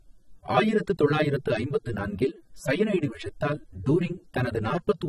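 Throughout the speech, a screen or video cable is coupling into the audio path, producing video or display buzz. It sits at the 59.94 Hz field rate with hash above it and a thin 15.7 kHz line-rate whine, roughly 35 dB below the voice.

Also throughout, everything above 14 kHz is missing and the speech sounds dull and smeared, with a warbly, fizzy edge on sibilants. This is likely AAC compression, with the plainly audible damage fitting a low bitrate around 24 kbps.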